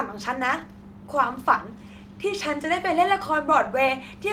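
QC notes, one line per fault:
Throughout: clock drift between sender and receiver. The pacing of the speech feels faintly unsteady, with small hiccups at uneven spacing. The sender's clock runs about 1.5% slower than the receiver's, so the jitter buffer keeps draining and the receiver must pad the stream to keep going.
0.42 to 3.68 s: repeated timing corrections. The speech drags slightly, at 98% speed, with slight stutters as short pieces are repeated. The receiver keeps stretching the audio to cover the slow sender, adding something like 70 ms over this stretch, all in the same direction.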